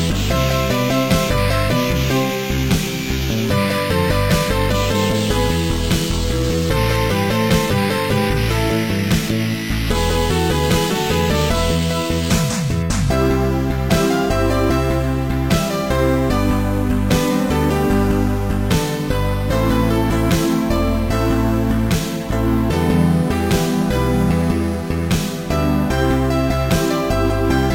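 No technical faults are audible.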